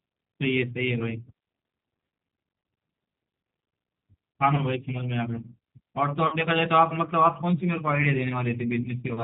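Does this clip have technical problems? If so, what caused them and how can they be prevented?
Yes. The whole clip has G.729 codec damage: audibly rough, synthetic speech with nothing above 4 kHz, which fits an 8 kbit/s G.729A encoder rebuilding speech from pulses and filters. A wider-band codec or a higher bitrate would avoid this.

There's also VoIP packet loss concealed by the speech codec at 4.55 to 4.63 s and 6.27 to 6.37 s. The decoder stretches the last sound into a fading buzzy tone or coloured noise and is slow to recover. Jitter buffering, forward error correction or a less congested network path would prevent it.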